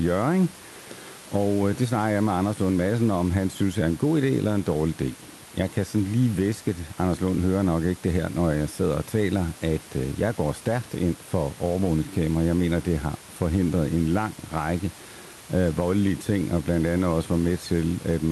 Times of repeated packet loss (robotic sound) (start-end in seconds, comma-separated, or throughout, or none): none